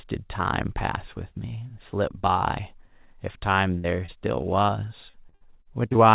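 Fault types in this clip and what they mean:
burst of packet loss: From about 3.78 to 3.86 s, roughly 60 ms of speech is lost, and the last sound is stretched into a fading hold before the speech picks up further on. It is one longer gap, not a fleeting blip.
short concealed packet loss: At 4.06 s, and again from 4.62 to 4.70 s as two back-to-back holes, about 20 ms each is missing and bridged from the preceding sound. Each leaves a brief smear or wobble, isolated and not a sustained run.
repeated packet loss (robotic sound): Between 5.1 and 5.97 s, eight gaps arrive in quick succession, the longest about 58 ms and about 240 ms missing in all. Each is patched before the next, so about a quarter of the stretch is filled-in sound, choppy and robotic.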